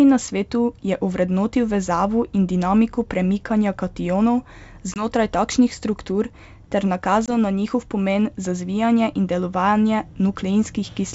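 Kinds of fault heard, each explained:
Packet loss on an ADPCM call: twice, around 4.94 s and again at 7.26 s between "struktur ter" and "na njihov pomen za", a 20 ms chunk drops out, about one packet each time, and gets filled with silence. Because the G.722 coding rebuilds each sample from a running prediction and step size, the receiver's state drifts away from the sender's during the gap, so the speech comes back slightly distorted before it re-locks.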